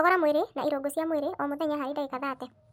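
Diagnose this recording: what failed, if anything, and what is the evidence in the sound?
A wrong sample rate at the playback stage: the samples are clocked out faster than they were captured, with no resampling. Throughout, the speech runs 1.5 times too fast and sits about 7 semitones high, which fits 32 kHz material played at 48 kHz.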